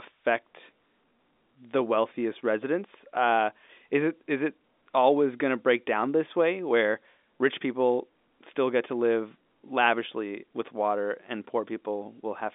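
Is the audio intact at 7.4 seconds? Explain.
Yes, the audio is intact at 7.4 seconds, with the speech carried cleanly through the narrow G.711 telephone band.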